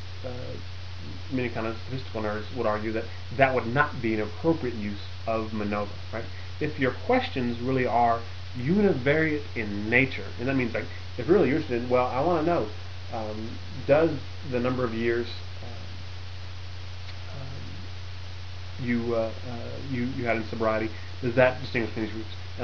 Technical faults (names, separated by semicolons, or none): none